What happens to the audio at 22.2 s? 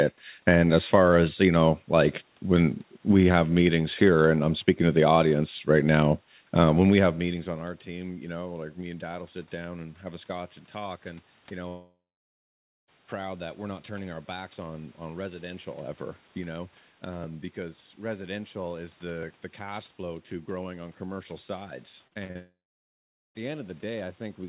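Right after "growing on commercial sides", the speech turns choppy and robotic from 22.07 to 22.37 s. This is repeated packet loss (robotic sound): several short holes, the longest about 39 ms, are each patched by stretching the preceding sound, so concealment fills nearly half the span.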